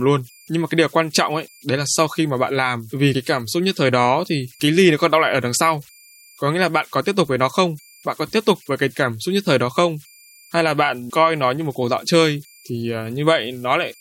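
Converter idle tones run throughout. An undithered delta-sigma converter cycles through fixed bit patterns, leaving a faint whistle around 2 kHz, about 31 dB below the speech.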